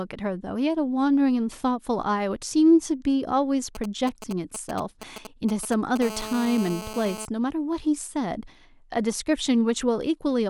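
From 3.75 to 5.98 s a galloping dit-dit-dit of brief rasping buzzes cuts across the speech, sitting roughly 10 dB below it. These are GSM signalling bursts. A nearby 2G phone was exchanging short groups of radio bursts with its network, as it does before a call or message arrives. The audio circuitry rectified each group, turning the radio pulses into short bursts of a 217 Hz buzz.

At 6.02 s the pattern becomes continuous. A hard, raspy GSM phone buzz at 217 Hz, rich in harmonics, runs steadily until 7.25 s at about 12 dB below the speech and bears no relation to what is being said. The nearby phone has moved into an active call and is transmitting 217 bursts every second without a break. The rectified pulses become a constant tone with a sharp, buzzy edge.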